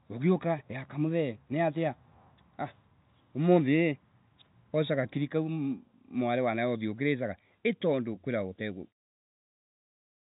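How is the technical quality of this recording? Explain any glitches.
No glitches turn up in this speech recording; it carries the narrow band of G.711 telephone coding, with nothing above about 3.8 kHz, and ends on a smooth fade-out.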